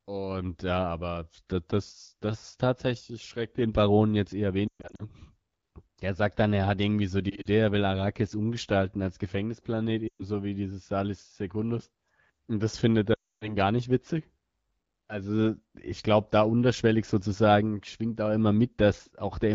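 Speech over an AMR wideband (HD Voice) link, which sounds clear apart from light coding colour, has lost AMR speech frames at 4.68–5.03 s after "jetzt eher", 7.30–7.48 s, 10.07–10.26 s before "wie dieses", and 13.13–13.57 s between "das findet" and "gar nicht witzig". The decoder stretches the last good sound and fades it quickly, leaving brief warbles and dips, and near silence in the longer runs, rather than hard clicks or abrupt digital gaps. Speech then returns weak for a moment.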